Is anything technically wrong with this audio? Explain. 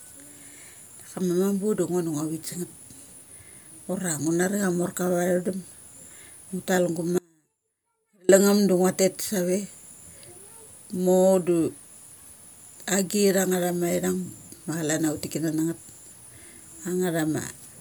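Yes. From 7.18 to 8.29 s the speech drops out for about 1.1 seconds, an audio dropout to a faint residue. Only a faint sound remains, way down, around 35 dB under normal. It's likely the signal path broke briefly while the downstream chain stayed live, so it cuts abruptly rather than fading.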